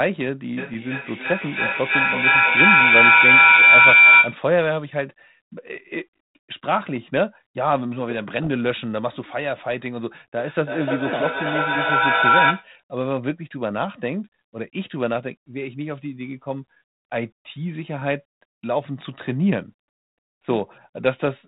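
From 0.57 to 4.45 s a feedback howl builds. Two devices on the same call share a room, and the loop from microphone to loudspeaker gains level each round. It narrows to a tone around 2 kHz, with a loop delay of about 300 ms, peaking about 11 dB above the speech.

At 0.74 s, inside the howl, and again from 8.44 to 8.48 s, bit errors on an ADPCM link produce short pops and rough bursts. Flipped bits throw off the decoder's step size and predictor, so each error rings on for a few milliseconds with brief level jumps. The link's band-limited sound fits 32 kbit/s G.726.

From 10.38 to 12.75 s there is feedback echo between two devices. One device replays what the other's microphone sent, and that microphone picks it up again, beyond the reach of either echo canceller. The speech returns about every 300 ms, thinner and more ringing, peaking about 6 dB above the original.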